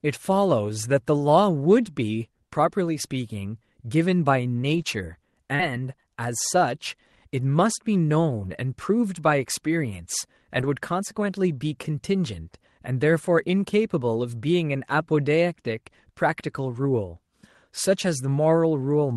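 Short concealed packet loss at 5.55 to 5.61 s: about 40 ms of the speech arrived too late for the decoder, which covered 37 ms of it by extending the preceding sound and then blending back, leaving a brief smear where a short sound can disappear.

Lost packet rebuilt from error correction at 5.59 to 5.61 s (20 ms), 8.45 to 8.55 s (60 ms) and 10.59 to 10.65 s (40 ms): the decoder played low-bitrate Opus backup copies carried in the following packets. There is no gap, but these stretches sound rougher and noisier than the surrounding 12 kHz-band call audio.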